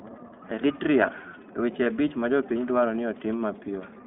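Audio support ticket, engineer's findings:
iLBC codec, whole clip. Narrowband speech limited to roughly 150 Hz to 3.6 kHz, with nothing present above it. Plainly audible coding damage: rough, slightly synthetic texture from the excitation being coded frame by frame. Frame behaviour fits the 20 ms, 15.2 kbps iLBC mode. Component: the codec stage on the call path.

Lost iLBC frames, 1.84 to 1.87 s, just before "abich ma jopiny dwaro". Brief held, buzzy vowel-like sustain where the decoder repeats the last pitch cycle mixed with noise. The gap fits a single 20 ms frame lost in transit. Recovery is immediate because each iLBC frame decodes without depending on the one before. Component: network packet loss, concealed by the decoder.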